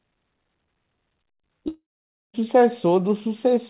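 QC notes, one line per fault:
1.68–2.35 s, long network dropout: the speech cuts out, the last sound smears into a fading buzz, then there's about half a second of silence before it comes back with 0.66 s simply gone, likely packets lost somewhere on the 4 kHz-limited call path.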